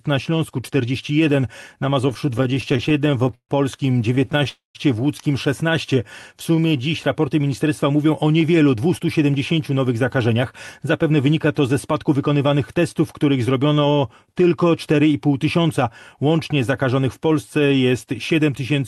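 Speech carried over a WebRTC call path, its top end stopping near 12 kHz, which fits Opus at a moderate bitrate; over that path the delivery breaks up repeatedly. From 2.09 to 3.51 s there are repeated stalls (stutter): 23 short holds, the longest about 139 ms, add 357 ms in all, roughly a quarter of that stretch, because packets kept arriving too slowly and the jitter buffer kept running dry. On a spectrogram the harmonics freeze into short horizontal smears, the longer ones fading, before the speech resumes. A second, milder stutter from 4.15 to 4.47 s adds six brief holds of at most 16 ms (60 ms in total), visible as small flat patches in the waveform. Right after it, from 4.49 to 4.77 s, comes a call audio freeze: the last sound is stretched into a decaying buzz for about 257 ms, the final 140 ms of it silent, so a flat, empty band cuts across the spectrogram. The likely cause is packets held up in transit, raising the delay by the same 257 ms, with nothing lost once the speech resumes. 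From 5.95 to 6.82 s a jitter buffer slow-down replays single pitch periods to rebuild the buffer, adding 72 ms so the speech runs at about 93% speed at unchanged pitch. Syllables look slightly elongated, with repeated identical cycles in the waveform. Two jitter buffer speed-ups then drain the excess. One runs from 8.67 to 10.42 s, just after "mówią o", at about 108% speed, removing roughly 150 ms. The other runs from 10.87 to 13.33 s, ending before "zrobiono tylko", at about 107%, removing roughly 200 ms. Pitch is kept throughout, and the speech sounds hurried, with syllables visibly compressed in time.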